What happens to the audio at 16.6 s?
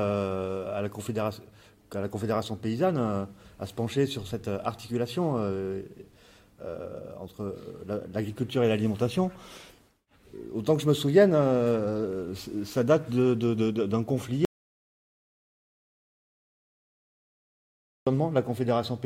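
At 16.6 s the clip is inside an audio dropout to silence running from 14.45 s to 18.07 s, about 3.6 s long. The sound cuts off abruptly into silence with no room tone, then returns just as suddenly. The likely cause is the input being lost, through a disconnect, failed link or mute, while silence kept being written. On a waveform it shows as a flat line, and on a spectrogram as a blank band with sharp vertical edges.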